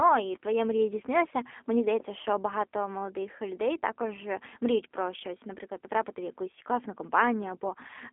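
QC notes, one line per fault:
throughout G.729 codec: the speech sits in a narrow line band of 250 Hz to 3.5 kHz and carries a plainly audible rough, slightly synthetic grain, as if the voice were rebuilt from a vocal tract filter, a pitch predictor and sparse pulses in each short frame. That fits an 8 kbit/s G.729A stream. A plain telephone band-limit would only thin the sound; here the texture inside the band is also damaged.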